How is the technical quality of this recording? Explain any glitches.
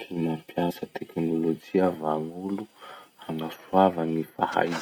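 The recording has two brief dropouts from compressed frames skipped, at 0.70 s and 3.28 s. At each point, whole frames of the coded audio, each 26.1 ms long, never reached the output, so the speech lurches forward: about one frame (roughly 30 ms) at 0.70 s and about two frames (roughly 50 ms) at 3.28 s. Overlap between adjacent frames blends the join into a short smeared blip instead of a sharp click.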